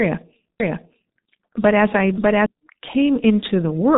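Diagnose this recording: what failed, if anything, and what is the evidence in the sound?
The codec stage failed: the whole recording carries G.723.1 damage at a 6.3 kbit/s rate, with nothing above 3.8 kHz, a hoarse, muffled texture and smeared consonants. Unlike a plain telephone band-limit, its slow 30 ms frame updates blur transitions throughout.

A doubled audio track runs from 0.6 to 2.46 s. A second full-band copy trails by roughly 0.7 s at about the same level, most likely from a second capture path or misaligned edit. Unlike room echo or reverb, it neither decays nor colours, and it begins and ends abruptly.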